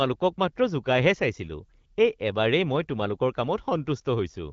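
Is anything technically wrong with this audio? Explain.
No, nothing is technically wrong.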